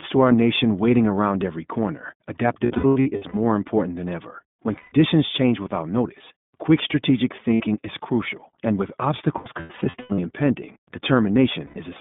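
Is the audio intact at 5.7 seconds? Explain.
No. At 5.7 s, as throughout the speech, the iLBC codec is at work: each 20 ms frame is coded on its own, which fits its 15.2 kbps mode, leaving a plainly rough, synthetic texture within a 150 Hz to 3.6 kHz band. That grainy roughness is what separates it from simple telephone band-limiting.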